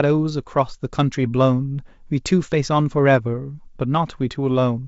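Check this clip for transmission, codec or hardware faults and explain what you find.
Nothing here needs flagging: the speech comes over the G.722 wideband link at 64 kbit/s, and the coding does its job just as it should.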